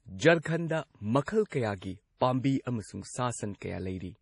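Throughout, the speech carries heavy MP3 compression artefacts, likely from a low bitrate around 32 kbps: nothing above 10.6 kHz, watery swirling, metallic sibilants and smeared attacks.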